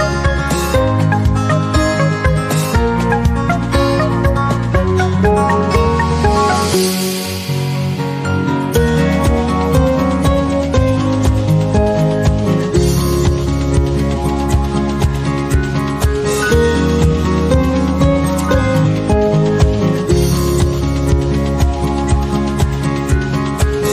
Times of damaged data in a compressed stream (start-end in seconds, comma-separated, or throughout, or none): 14.12-14.17, 18.81-18.87